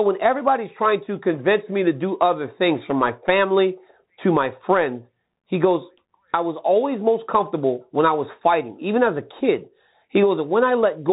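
Speech heard through the Bluetooth CVSD headset codec for the whole clip, with plainly audible damage: a granular hiss under the voice and scratchy s sounds, consistent with 64 kbps one-bit delta coding. A spectrogram shows everything above 3.8 kHz empty.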